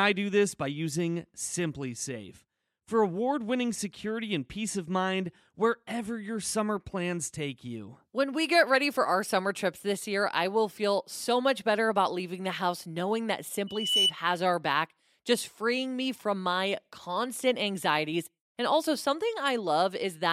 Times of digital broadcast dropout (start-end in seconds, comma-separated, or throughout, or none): none